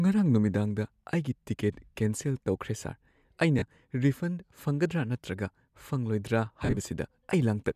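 At 3.59 to 3.62 s and 6.63 to 6.78 s, lost LE Audio frames: the decoder repeats the last spectrum with random signs, so the sound smears into noise. The first gap fits three 10 ms frames. The second is scattered dropouts, the longest about 40 ms. On a spectrogram, harmonics turn to diffuse noise.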